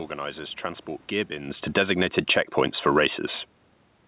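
From 1.12 s to 3.12 s, automatic gain falling: the gain control judged the speech too loud and eased its gain down by about 6 dB, so the speech and room background sink together. From 1.9 s to 3.43 s, automatic gain rising follows: the control then judged the level too low and brought it up by about 7 dB, swelling speech and background together over roughly a second and a half.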